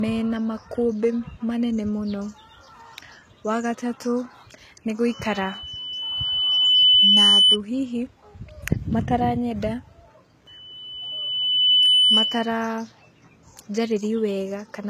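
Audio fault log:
throughout: low-bitrate audio saved at a high bitrate. The speech has nothing above 14.8 kHz and still carries the artefacts of an earlier low-bitrate encoding. This likely comes from a low-bitrate encode, consistent with HE-AAC around 20 kbit/s, later re-saved as a larger MP3 that cannot restore the lost detail.
5.10–7.58 s and 10.47–12.64 s: loudspeaker feedback squeal. A single 3 kHz tone swells over roughly 2 s the first time and 1.5 s the second, peaking about 10 dB above the speech. A microphone is picking up its own loudspeaker, and the loop gain exceeds one at that frequency.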